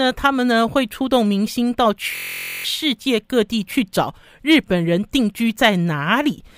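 At 2.16 s to 2.65 s a system hang loop occurs. The system froze while the hardware kept replaying one 23.2 ms slice, which fits a 1024-sample buffer. Repeating 21 times, it forms a steady 43.1 Hz buzz, and roughly half a second of speech is lost.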